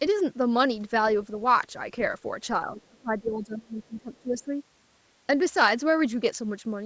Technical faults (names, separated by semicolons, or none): speech suppressed in double talk; other side's voice leaking through